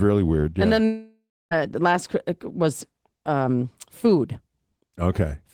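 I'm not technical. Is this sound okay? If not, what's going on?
No. From 0.85 to 1.53 s, the audio likely stopped arriving over the network, a long network dropout. The player stretches the last sound into a fading buzz, then near-silence, and the speech resumes at "last uh was um" with about two-thirds of a second lost.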